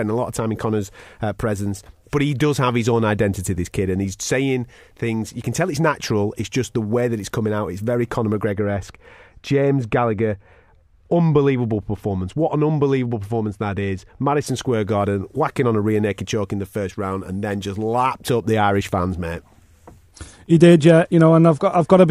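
From 8.53 to 14.47 s the speech turns dull and muffled: de-emphasis applied wrongly, a treble cut meant to undo pre-emphasis that was either never there or already undone, falling smoothly to about 13 dB down at 10 kHz. Unlike a low-pass filter, it has no sharp cut-off.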